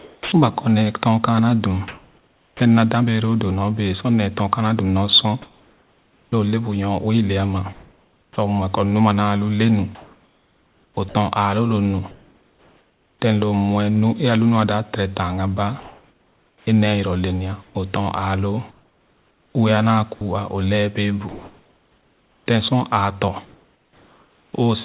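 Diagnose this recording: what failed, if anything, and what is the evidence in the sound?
Speech turns choppy from 0.0 to 2.6 s, 5.42 to 13.22 s, and 15.8 to 24.53 s after "dap tere tanga ba". This is likely sound chopped by the voice detector in the sender's call processing, which swapped about 1 s, 3.7 s and 4.1 s of audio for comfort noise.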